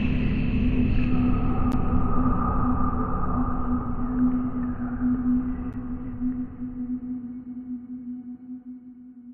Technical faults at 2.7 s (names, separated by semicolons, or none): none